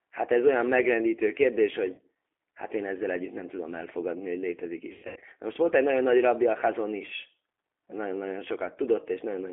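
Throughout, the G.729 codec confines the speech to roughly 250 Hz to 3.5 kHz and makes it rough and synthetic. This is a rebuilt voice at 8 kbit/s, not merely a narrow band. At 1.95 to 2.01 s, VoIP packet loss concealed by the speech codec covers a 30 ms gap with stretched-out, fading sound rather than silence. From 4.92 to 5.25 s, about 240 ms is lost in pieces, the longest 120 ms, leaving the voice stretched, fading and weak until it recovers.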